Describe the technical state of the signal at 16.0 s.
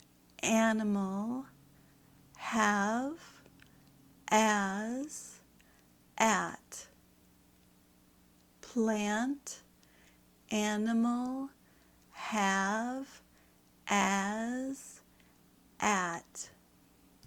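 Around 16.0 s the signal is intact, with no fault audible at that moment.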